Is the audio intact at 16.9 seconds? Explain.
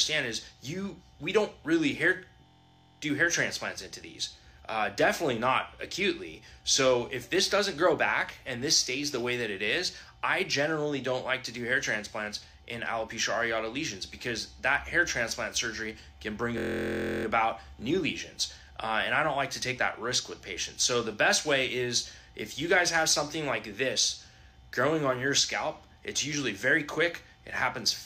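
No. A system hang loop runs from 16.58 to 17.25 s. The system stalled while the sound hardware kept replaying the same stretch of its ring buffer, so one 23.22 ms fragment repeats exactly, roughly 29 times, which fits a 1024-sample buffer. With a loop that short, the repetition merges into a steady, mechanical buzz at about 43.1 Hz. Practically no audio is lost; playback simply freezes on that fragment until it resumes.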